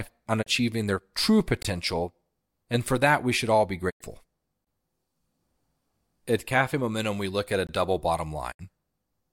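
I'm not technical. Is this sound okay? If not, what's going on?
No, there are two separate hiccups.

First, a digital broadcast dropout: the receiver briefly lost the signal and muted, fading out quickly before going silent. That happens at 0.41 to 0.48 s, just before "their true", at 3.89 to 4.02 s, right after "we should all be", and at 8.51 to 8.61 s. The sound in those holes is simply gone.

Second, there's a gap between chunks. The audio arrives in 3-second pieces, and each join leaves a tiny silence, about 21 ms, at 1.63, 4.65 and 7.67 s (that last one falls between "we look at a" and "double bottom"). Nothing's missing there; it just stutters.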